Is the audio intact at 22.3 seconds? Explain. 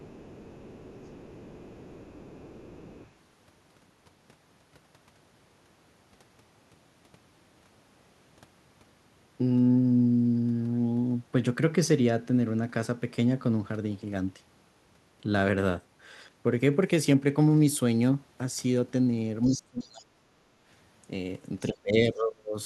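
No. From 21.69 to 22.56 s the speech sinks sharply, by about 35 dB at its deepest, and is held down for roughly 0.7 s in total, so 22.3 s falls inside the damage. This is speech suppressed in double talk, likely caused by both ends talking at once: the echo canceller could not tell the near talker apart from echo off the loudspeaker, so it pulled down everything it heard.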